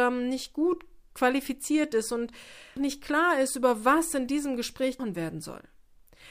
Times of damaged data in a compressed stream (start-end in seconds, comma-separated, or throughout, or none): 2.77, 4.99